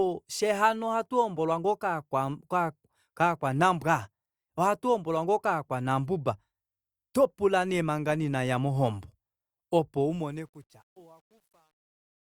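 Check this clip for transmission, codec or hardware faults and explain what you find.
One fault turns up, near the end: truncation distortion on a fade, from 10.0 s to 12.27 s. During the fade-out, the gain stage keeps too few bits and adds no dither, so the grit points to roughly 10-bit resolution. As the level sinks toward the smallest step, the waveform collapses into coarse square steps. From 10.54 s to the end, the tail turns gritty.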